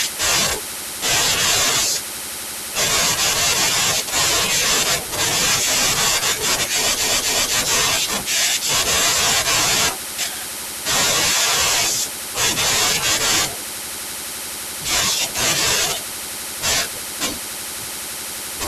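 Speech recording with repeated frames at 7.04–7.55 s: duplicated compressed data replays a 256 ms block twice more, producing a stutter and adding 512 ms.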